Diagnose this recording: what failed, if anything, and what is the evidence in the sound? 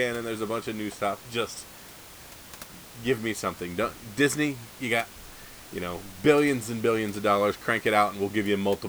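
Nothing failed in this recording.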